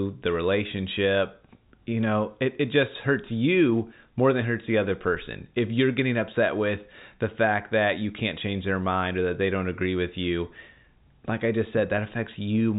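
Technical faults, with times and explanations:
No technical faults can be heard in this speech clip. The G.711 telephone coding is working as it should, passing nothing above 3.8 kHz and leaving at most a faint quantisation hiss that rises and falls with the level.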